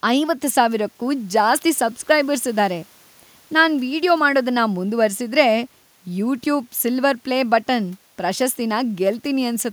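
No technical faults can be heard in this speech clip. Some background noise from the room sits underneath, about 37 dB below the speech.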